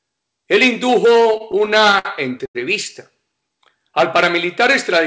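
From 1.33 to 2.57 s, packets arriving late kept draining the jitter buffer, causing repeated stalls (stutter): twelve brief holds totalling 252 ms, the longest 91 ms, make the band-limited sound drag and hiccup.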